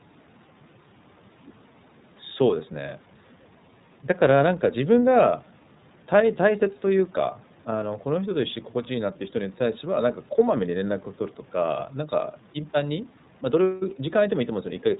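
Speech passed through the iLBC codec for its whole length, coding each frame independently and keeping nothing above 4 kHz, so it sounds muffled, rough and plainly synthetic, which fits 30 ms frames at around 13 kbps.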